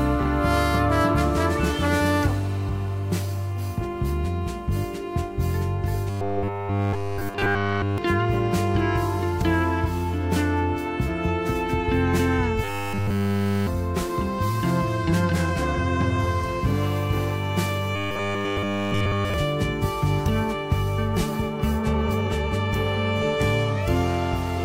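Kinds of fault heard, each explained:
Robotic sound from repeated short buffers: three stretches become a rigid 100 Hz buzz, likely from a looped 10 ms buffer. A spectrogram shows flat, evenly spaced harmonics, and a waveform shows identical repeating cycles.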